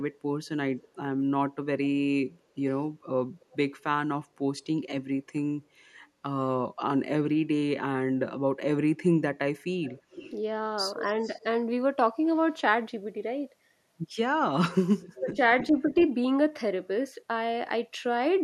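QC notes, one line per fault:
0.14–0.19, 0.79–0.89, 3.4–3.57, 9.83–10.31, 11.21–11.43 and 15.01–15.37 s: echo leak. A delayed copy of the speech comes back, very faint at first and growing to fairly strong by the 15 s burst. The delay rises from about 291 ms to 318 ms and then 379 ms. The likely cause is a loudspeaker-to-microphone path that the echo canceller failed to fully remove. On a spectrogram, the harmonic patterns repeat, shifted right by that delay. The waveform shows small trailing bursts after the main ones.
15.08–15.39 s: speech suppressed in double talk. While the strong echo overlaps the talker, the speech dips in pieces, dropping by as much as roughly 25 dB over a total of about 150 ms. This is likely because the echo canceller could not tell the talker from the returning echo and turned both down. On the waveform, the envelope shows notches. The spectrogram shows brief gaps.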